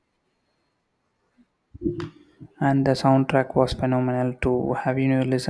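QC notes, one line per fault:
Nothing stood out on listening to this speech clip.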